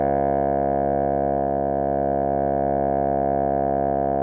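Nothing in this bit of music stands out as a technical fault, so there's no problem to place on the timeline.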